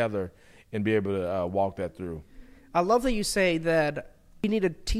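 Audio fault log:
4.44 s damaged data in a compressed stream: a brief blip as the decoder misreads corrupt bytes and resyncs.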